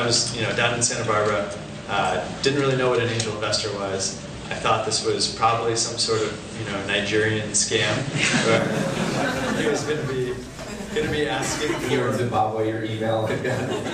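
From the start until 8.58 s the sound carries nothing above 8.9 kHz and a background noise about 40 dB down, then opens up with no gap and shifts level by about 5 dB, likely an input switched to a poorer device and back.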